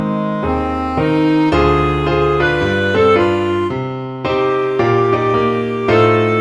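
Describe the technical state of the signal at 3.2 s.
At 3.2 s the signal is intact, with no dropout, clipping, distortion or other audible fault in the sound at that point.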